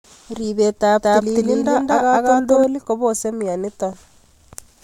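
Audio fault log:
1.02 to 2.64 s, doubled audio track: the speech is joined by a second, full-band copy trailing around 200 ms behind and roughly as loud as the original, so every syllable is heard twice with a distinct slap rather than a reverberant tail. The copy carries no decay or room colour and cuts in and out abruptly at both ends. This likely comes from the signal being captured again through a slower path and mixed back in.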